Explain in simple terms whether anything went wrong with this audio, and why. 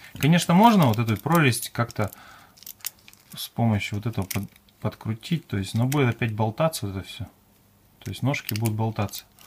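Nothing went wrong with this audio; there are no faults to point to anywhere in it.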